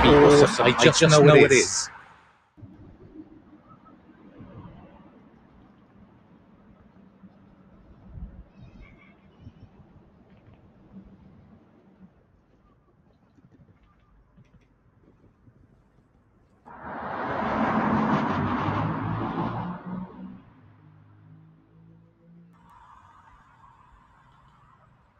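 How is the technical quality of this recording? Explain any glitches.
The recording has two faults, and both run through the whole clip.

A doubled audio track is audible throughout. A second full-band copy trails the first by about 150 ms, at roughly the same level. It has no decay or room colour. The likely cause is a second, slower capture path or two misaligned copies in an edit.

A noise suppressor applied to music or sounds also acts throughout. A speech-tuned suppressor treats steady tones, ambience and reverb as noise. Attacks pass, but held sound and tails are pulled down by around 20 dB. The result pumps, flutters or thins out.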